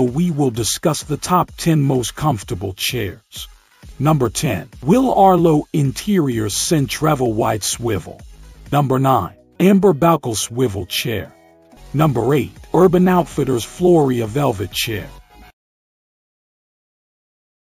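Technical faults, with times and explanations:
Throughout: imaging from sample-and-hold upsampling. Each sample was repeated without a smoothing filter, which fits a 16 kHz source raised to 48 kHz. Mirrored copies fill 8 kHz to 16 kHz at about -19 dB, a metallic fizz tracking the sound's level and moving against its pitch.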